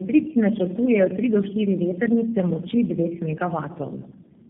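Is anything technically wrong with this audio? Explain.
Yes. Throughout, the speech sounds rough, muffled and warbly, with nothing above about 3.7 kHz. This is tandem speech coding: the signal likely passed through three low-rate speech codecs in a row, such as AMR-NB twice and then G.729A, each re-encoding the previous one's degraded output.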